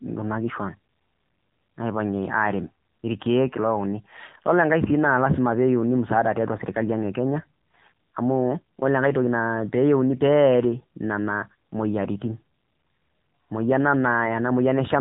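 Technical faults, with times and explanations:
Throughout, AMR narrowband mobile codec: the speech went through a low-rate mobile speech coder, with a damage level that points to roughly 7.4 kbps. It rebuilds the voice from a vocal-tract model and sparse pulses, so nothing above 3.8 kHz survives, leaving it muffled, buzzy and plainly synthetic.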